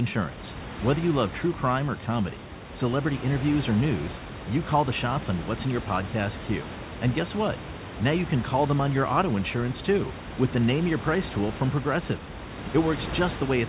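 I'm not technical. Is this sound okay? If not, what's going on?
Yes, it's fine: nothing here has gone wrong, and you can relax about it.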